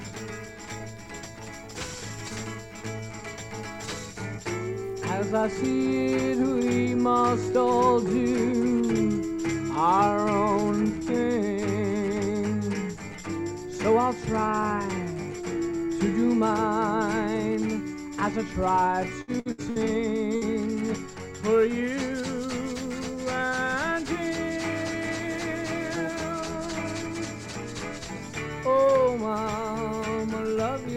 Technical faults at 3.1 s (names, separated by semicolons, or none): none